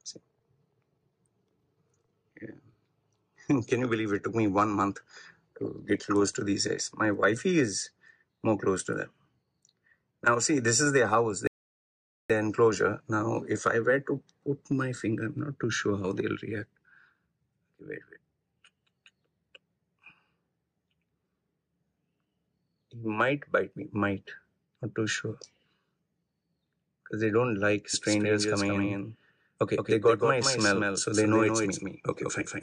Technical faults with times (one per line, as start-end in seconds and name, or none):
11.47-12.30 rebuffering stall
27.94-32.62 doubled audio track